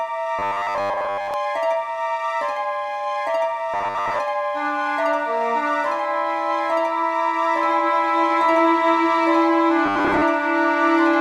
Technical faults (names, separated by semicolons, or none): robotic sound from repeated short buffers